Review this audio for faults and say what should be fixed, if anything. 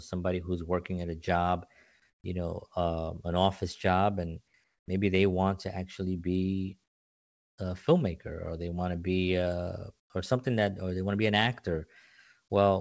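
Comfort noise in place of the background fills four pauses: 2.10–2.24 s after "working at a job", 4.64–4.88 s, 6.84–7.58 s between "want to actually be" and "a filmmaker or they", and 10.00–10.10 s between "want to be uh" and "or something that or". Each time, the real room tone gives way to a flat, featureless hiss that is about 7 to 19 dB quieter. This is likely discontinuous transmission: the sender stops during the pause, and the receiver synthesises noise to fill the gap. Unlike a dropout or a noise gate, the pause never goes fully silent. The hiss is also too smooth to be the real background. To prevent it, disable discontinuous transmission on the sending side.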